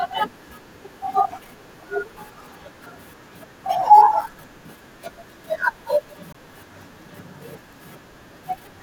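At 6.33 to 6.35 s the speech drops into a 20 ms block of digital silence, samples zeroed, most likely because the output buffer went unfilled. The abrupt edges give a short hole; the waveform shows a flat line and the spectrogram a blank vertical stripe with broadband edge streaks.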